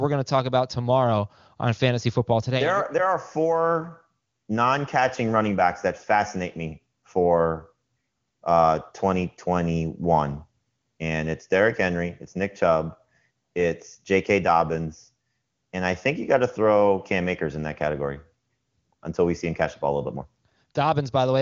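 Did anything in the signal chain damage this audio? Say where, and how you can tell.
No, nothing in the chain damaged this speech: the band stops near 7.2 kHz, which points to an AMR wideband (HD Voice) link running at a high rate, around 23.85 kbit/s, where the coding leaves at most faint traces.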